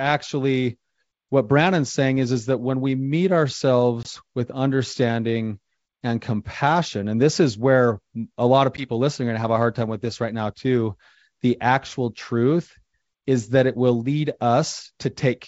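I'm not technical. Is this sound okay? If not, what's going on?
No. The speech briefly breaks up twice, from packet loss on an ADPCM call. At about 4.03 to 4.08 s, just before "with understanding and compassion", a short chunk of sound vanishes into sudden silence. At about 8.77 to 8.89 s, between "where a lot of" and "listening are going to", it happens again. In a simple dropout the sound would return cleanly. Here the decoder loses track of the sound it is rebuilding, so speech comes back slightly distorted before settling a moment later. The wideband phone coding itself sounds clear.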